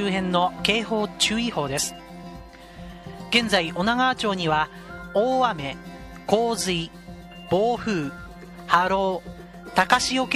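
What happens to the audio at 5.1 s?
Nothing goes wrong at 5.1 s; the audio runs through that moment intact, with no dropout, click or other fault to be heard.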